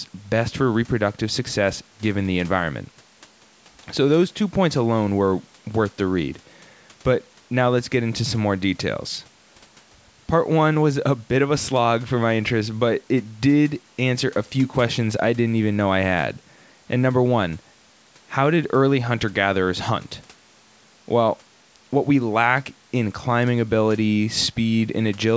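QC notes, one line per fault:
No faults found in this speech; the call microphone processing trims the lowest bass and leaves nothing above 8 kHz, as expected for that path.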